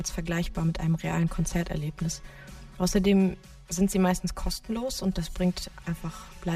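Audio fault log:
Throughout: channel delay (comb filtering). One channel lags by about 5 ms, so the mono sum cancels at evenly spaced notches from around 100 Hz up, giving that hollow, phasey tone.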